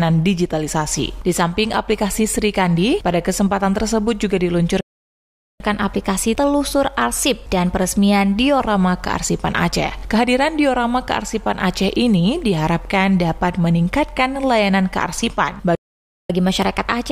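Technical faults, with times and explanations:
4.81–5.60 s, playback stall: the audio cuts to silence mid-flow for about 0.79 s, then resumes. The output is simply starved, most likely because the player's buffer ran dry or its audio thread was blocked, so nothing reaches the output until data flows again.
5.60–8.60 s, catch-up at higher speed: after the gap, the sound runs 1.1 times fast for three seconds, with pitch raised by roughly one and a half semitones. The player is resampling its backlog to recover the lost time, so speed and pitch rise together, then settle back to normal at 8.60 s.
15.75–16.30 s, playback stall: a second dropout to silence, about 0.54 s long, again interrupting the sound mid-flow before it resumes. As before, the likely cause is a buffer underrun or a blocked playback thread leaving the output with nothing to play.
16.30–17.11 s, catch-up at higher speed: the same 1.1-times speed-up follows, with pitch about one and a half semitones sharp, as the player again resamples to make up the delay. 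Here the faster section continues to the end of the clip.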